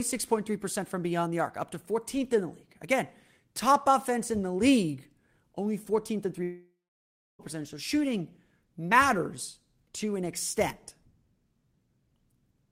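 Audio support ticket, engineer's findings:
Speech cuts out 6.43–7.42 s. Last sound smears into a fading buzz, then about 0.67 s of silence; resumes with roughly 0.96 s of speech missing. Likely long network dropout: receiver concealment ran out before packets resumed, lost audio never replayed.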